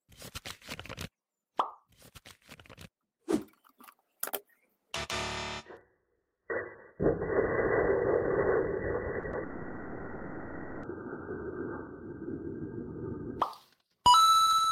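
At 9.19 s a short concealed packet loss fills about 40 ms of missing audio, through to 9.25 s, and a second one at 9.31 s covers 20 ms up to 9.35 s. In both, the receiver bridged the gap by extending the preceding sound and then crossfading back into the real signal, so each registers as a brief smear or wobble rather than a clean cut.

From 9.43 s to 10.85 s the signal turns into a continuous synthetic extension of the last sound, a buzzy, hissy tone that persists for about 1.4 s and never falls to silence before the real audio resumes. This is likely a long network dropout, during which the receiver kept generating fill for the entire stretch. The material from that interval is gone, and the signal picks up again after the gap with nothing replayed.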